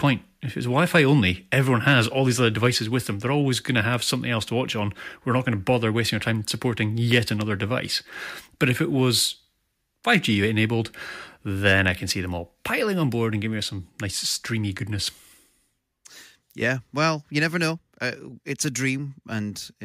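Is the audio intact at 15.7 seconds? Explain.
Yes, the speech at 15.7 seconds plays through intact, with no dropout, click, distortion or other fault to be heard at that point.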